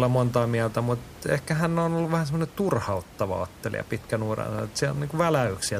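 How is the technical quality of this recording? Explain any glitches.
There's one real glitch: a single loud pop from 4.59 to 4.61 s, right after "turhauttava ottelija pitkän uran". It's a sharp click that jumps out at around 10 dB above the speech, and the talking carries straight on underneath it. The likely cause is a sudden voltage step or spike getting into the chain, whether from a plug, a switch, static or a driver hiccup. The electronics downstream then shape that jolt into a brief, punchy pop. The room noise, sitting about 20 dB below the speech, is just the space the mic was in, not a fault.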